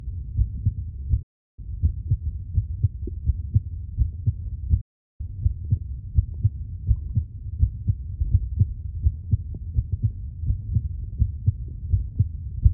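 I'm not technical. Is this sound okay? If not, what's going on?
No. The sound cuts out twice. This is a digital broadcast dropout. The receiver stopped getting good data, so it muted itself until clean signal came back. The first gap runs from 1.22 to 1.59 seconds. The second runs from 4.81 to 5.21 seconds. Each lasts a little over a third of a second. The sound fades out very fast, almost like a switch. Whatever played during those gaps is simply gone.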